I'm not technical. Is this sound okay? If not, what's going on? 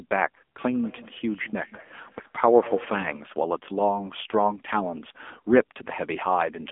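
No. Throughout, the voice has the thin, buzzy, plainly robotic sound of the AMR narrowband mobile codec, squeezed into an old phone line's range, roughly 250 Hz to 3.5 kHz.

From 0.61 to 3.31 s there is feedback echo between two devices. Another device on the call replays the voice, and it comes back about every fifth of a second, quieter and ringing.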